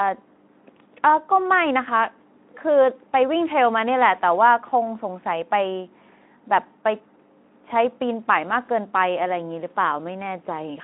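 No technical faults can be heard anywhere in this speech recording. It has come through a Speex link at what sounds like about 15 kbps, so the speech sits in a telephone-style band of roughly 200 Hz to 3.5 kHz with nothing above 3.8 kHz and only a light coarseness from the codec.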